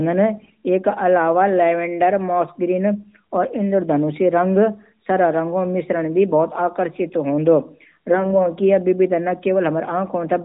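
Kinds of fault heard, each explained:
AMR bit errors: The speech turns hoarse, scratchy and gargly for a moment at 0.36 to 0.53 s and again at 8.11 to 8.48 s, while pitch and loudness stay roughly where they were, heard through the band-limited sound of the AMR narrowband codec. On a poor radio link, some of the less protected bits in each 20 ms frame arrived flipped, a few percent of them. The pulse positions and fine pitch, gain and spectral values then decoded wrong.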